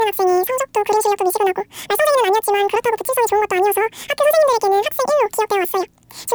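From start to end, the speech plays at double speed and an octave high. This is a wrong sample rate: audio recorded at 24 kHz is played back at 48 kHz.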